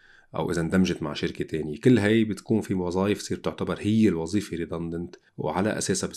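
The speech has no technical faults to describe.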